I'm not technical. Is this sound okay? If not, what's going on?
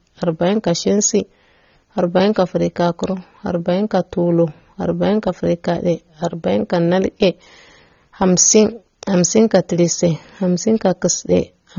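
No. Throughout, the speech sounds dull, with nothing above about 7 kHz, and sibilants fizz or warble, most likely from heavy AAC compression rather than a muffled microphone.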